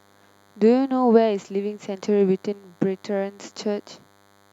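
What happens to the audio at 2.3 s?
At 2.3 s, a DECT cordless phone buzz runs under the speech, as it does throughout. Its 100 Hz radio bursts get rectified, leaving a thin, harmonic-rich buzz well below the speech.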